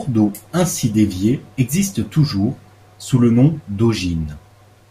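No technical faults are audible.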